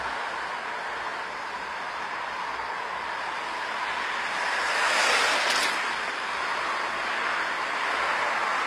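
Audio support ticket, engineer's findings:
Treble gritty and metallic throughout, harmonics not lining up across the crossover. Nothing above 15.5 kHz. Likely HE-AAC compression: lower band coded, treble rebuilt by copying lower bands upward. Damage plainly audible, which fits a low bitrate near 24 kbps.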